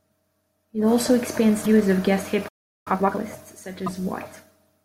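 At 1.62 to 1.66 s, between "also expands" and "of guest", a brief glitch marks damaged data in the compressed stream. The decoder misread corrupted frames, lost sync and hunted for the next header. Unlike a stall, it is over quickly, just a short garbled burst.

After "of guest", a playback stall silences the output from 2.48 to 2.88 s, about 0.38 s. The player likely ran out of buffered data. The speech simply halts with clean silence, no chirp, then resumes.

From 2.88 to 3.24 s, time-compressed catch-up follows. The player discards its backlog by splicing out small slices and cross-fading the rest, so speech runs at about double speed. Pitch stays normal, which separates it from a sped-up tape effect.

A second burst of damaged data in the compressed stream, at 3.86 to 3.88 s, gives another short blip.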